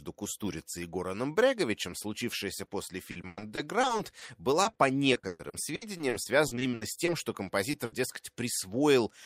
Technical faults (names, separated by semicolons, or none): short concealed packet loss; repeated packet loss (robotic sound); burst of packet loss